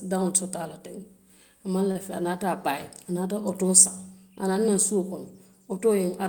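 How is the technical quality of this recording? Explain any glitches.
One glitch stands out, a short stall from a late packet at about 1.91 to 1.97 s. A packet of speech didn't turn up on time, so the jitter buffer drained and the receiver had nothing new to play. It padded the gap by stretching the last bit of sound for about 37 ms, then carried on right where it left off. Nothing is actually lost, but that moment drags slightly, with a faint buzzy, held quality, and everything after lands about 37 ms later.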